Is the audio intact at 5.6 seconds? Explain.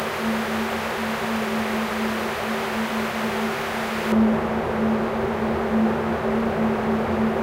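Yes, at 5.6 seconds the sound is intact, with no audible technical fault at that moment.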